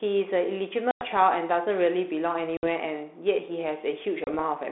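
Speech over a G.726 ADPCM line, band-limited to about 250 Hz to 3.6 kHz, with light coding hiss that fits 32 kbit/s. Packet loss on an ADPCM call cuts hard-edged holes at 0.91 to 1.03 s, 2.57 to 2.67 s and 4.24 to 4.40 s. About 100, 60 and 30 ms of audio go missing, around ten, seven and a few packets. Silence fills each gap. The decoder's predictor and step size lose track of the sender. So the sound returns slightly distorted before it settles.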